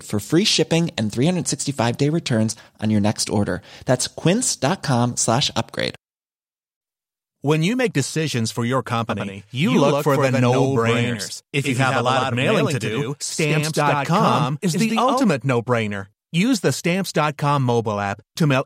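A doubled audio track runs from about 9.1 s to 15.2 s: the speech is joined by a second, full-band copy of itself trailing roughly a tenth of a second behind, only a few decibels quieter. The copy carries no decay or room colour, so it reads as a hard, slapback-like echo rather than reverberation. It switches in and out abruptly at both ends, which likely points to the signal being captured twice through a slower second path.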